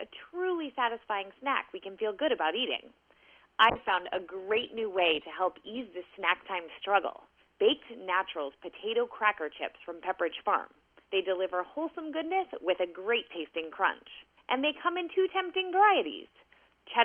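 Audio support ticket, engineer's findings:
Call bitrate drop, 3.7–8.07 s. Audio turns coarse, rough and watery, worst for about 2.3 s, then recovers. Encoder/bandwidth estimation: estimate collapsed, encoder forced to far fewer bits; sound suggests roughly 96 kbps falling to near 18 kbps.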